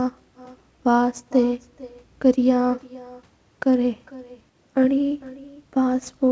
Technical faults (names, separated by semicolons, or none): echo with no canceller